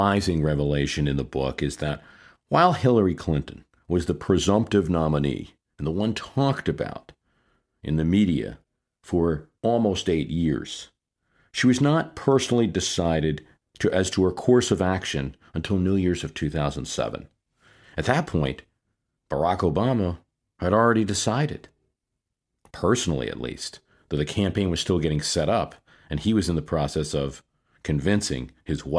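No technical faults can be heard anywhere in the speech recording: the signal runs without interruption throughout.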